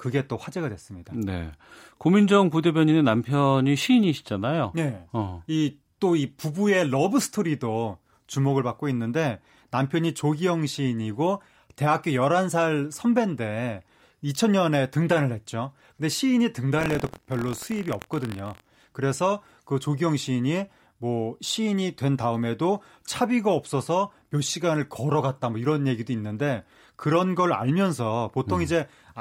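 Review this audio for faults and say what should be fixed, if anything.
Buffer tearing runs from 16.77 to 18.86 s. A 43.1 Hz buzz rattles through the speech. That rate fits a 1024-sample buffer. Each period holds a small slice of audio a tenth of a second stale, joined hard. Keep the write pointer safely ahead of the hardware read pointer.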